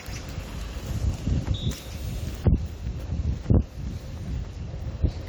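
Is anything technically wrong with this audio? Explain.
No, nothing technically wrong can be heard in this audio. It carries no audible faults.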